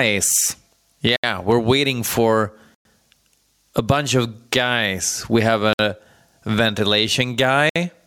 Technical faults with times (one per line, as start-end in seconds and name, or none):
0.00-8.07 gain pumping
1.16-1.24 Bluetooth stall
2.74-2.85 Bluetooth stall
5.73-5.79 Bluetooth stall
7.70-7.76 Bluetooth stall